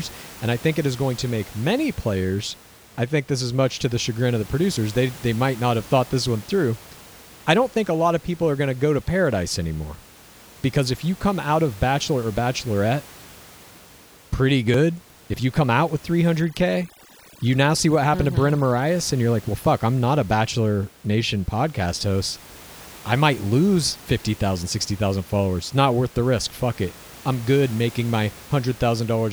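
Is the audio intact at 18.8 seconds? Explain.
No. Overdone noise removal runs from 16.41 to 18.87 s, after "you come out with": over-aggressive band suppression leaves twinkling near-silence and strips away quiet parts of the voice.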